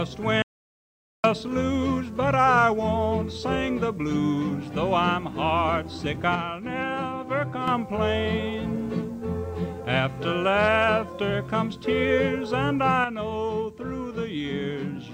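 At 0.42 s the sound stops dead and returns at 1.24 s, leaving about 0.82 s of complete silence with no room tone or background underneath. This is an audio dropout to silence. The likely cause is a brief loss of the input signal, such as a disconnected device, a broken link or a momentary mute, while the recorder kept writing silence. Whatever happened during that gap is missing entirely.

From 6.35 s to 7.68 s, and again from 13.04 s to the end, the level drops abruptly by about 6 dB. This is one channel dropping out. One side of the stereo pair was likely lost, so material shared by both channels is halved in the mono sum, while anything present only in the missing channel disappears while that channel is missing.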